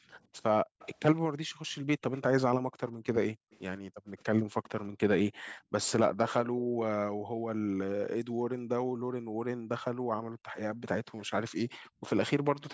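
Speech suppressed in double talk runs from 0.0 to 12.56 s: the speech repeatedly dips, by as much as about 40 dB, for around seven seconds in total, likely because an echo canceller mistook overlapping talk for echo. Echo leak appears at 0.79–1.21, 2.14–2.18, 2.89–2.94, 3.51–3.58, 5.46–5.52 and 12.70–12.73 s as a faint copy trailing by 164 ms, well below the speech, likely loudspeaker pickup that cancellation missed.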